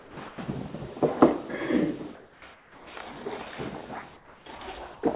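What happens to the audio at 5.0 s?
Comfort noise in place of the background, from 4.94 to 5.03 s. For those 90 ms the real background, which sits about 20 dB below the loudest sound, gives way to a steady, featureless hiss about 5 dB quieter. The likely cause is discontinuous transmission: the sender paused, and the receiver filled the gap with synthetic noise shaped to the background. Like the rest of the call audio, it stops at 4 kHz.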